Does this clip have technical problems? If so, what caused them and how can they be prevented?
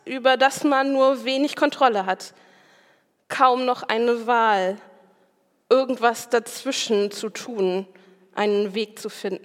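No, there are no technical problems to point to here. Nothing in the audio calls for a cause to be traced or a fix to be put in place.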